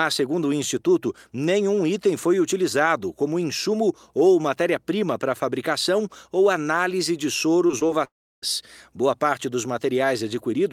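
Around 7.67, 7.79 and 7.87 s there are three quick hiccups of short concealed packet loss. Each is about 20 ms of the speech arriving too late, patched by stretching the preceding sound, so you hear a tiny smear or wobble rather than a gap.

From 8.05 to 8.44 s it's likely a long network dropout. The last sound trails off as a fading buzz or hiss, then roughly a third of a second of near-silence follows before the speech picks up again further along, with that stretch simply gone.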